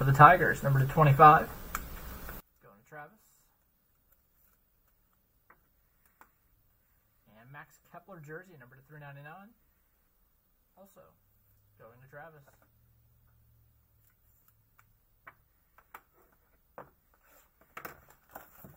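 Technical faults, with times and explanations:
2.40–18.77 s, one channel inverted: likely reversed polarity on one side, so shared content cancels in mono, dropping about 29 dB and leaving a faint residue.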